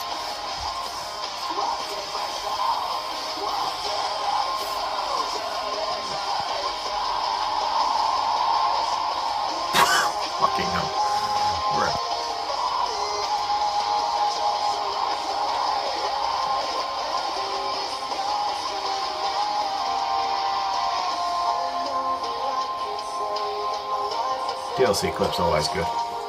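Nothing in this recording stands out as a technical problem; it runs along with no audible glitches or defects to point to.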